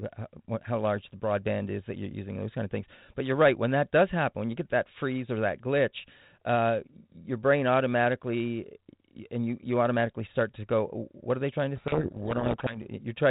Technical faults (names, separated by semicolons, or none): codec payload misread